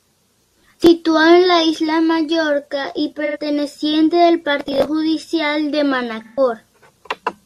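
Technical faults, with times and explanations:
3.25–3.37 s and 6.23–6.40 s, AAC frame loss with concealment: gaps of 85 and 128 ms, the second right after "al partido judicial de", which fits two and three lost frames. The decoder patches each from the last good spectrum, so they come out as smeared, noisy or phasey patches.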